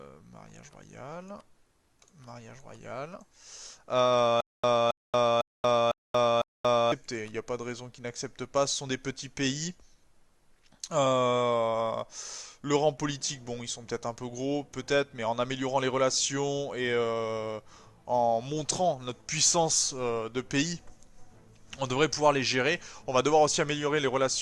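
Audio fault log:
4.41 to 6.92 s: stutter with silent gaps. The same short burst of sound, about 272 ms long, plays five times. Each burst is followed by about 231 ms of dead digital silence. The cycle repeats evenly every 503 ms. This is likely a stalled player or stream. At each retry it replays its last buffered fragment, then runs dry. Whatever audio belonged in those 2.5 s never plays and is lost.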